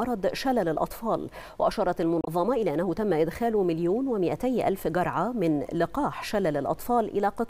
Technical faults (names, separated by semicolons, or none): damaged data in a compressed stream